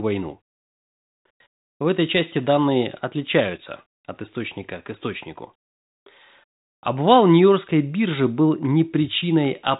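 No technical faults are audible in the speech; it runs through a G.726 ADPCM path at 40 kbit/s with the band stopping near 3.8 kHz.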